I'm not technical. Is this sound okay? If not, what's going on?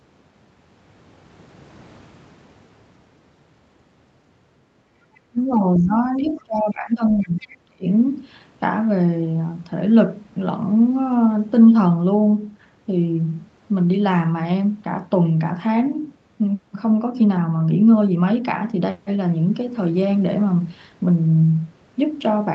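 No, there are a few problems, all bunched in two short spots.

First, the other side's voice leaking through: faint scraps of a second voice show up at 5.15 to 5.2, 6.17 to 6.22, 6.38 to 6.72 and 7.4 to 7.46 seconds. Most likely the other person was coming out of a loudspeaker and the echo canceller didn't fully scrub it from the microphone.

Around the same moments there's speech suppressed in double talk. From 5.3 to 5.61 and again from 5.8 to 7.86 seconds, the main speaker's voice keeps dipping sharply or dropping out in bits. That's likely both people talking at once, and the echo canceller turning everything down because it couldn't tell them apart.

Later, at about 11.11 and 11.99 seconds, there's a lost packet rebuilt from error correction each time. A tiny slice of audio, about 20 ms, went missing, and a lower-quality backup copy filled in. There's no gap, just a brief rough, slightly noisy blip.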